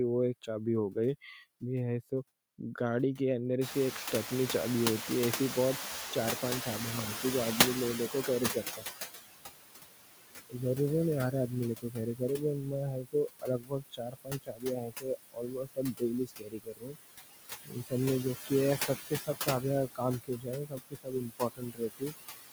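Noise suppressor artifacts run through the whole clip. The suppressor pulls steady noise down by about 16 dB frame by frame, so the residue sinks between phrases and rises under the speech.

Noise suppressor catching up, 3.61 to 9.01 s: the room noise jumps by about 25 dB near 3.5 s. The noise estimate needs 5.4 s to follow, so the noise passes loud at first, then sinks by about 14 dB.

Speech cut by the noise suppressor at 8.11–8.97 s, 11.79–12.39 s, 13.02–16.97 s, 17.64–17.93 s and 18.46–22.13 s: speech taken for noise is turned down by up to about 21 dB. It sounds swallowed and faint, briefly in the short spans and for around two seconds and one and a half seconds in the two long ones.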